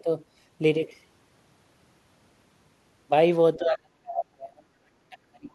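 From 3.56 s to the end, the speech drops sharply, by about 40 dB at its deepest. This is speech suppressed in double talk. Both sides were likely talking at once. The echo canceller took this talker for loudspeaker echo and turned it down.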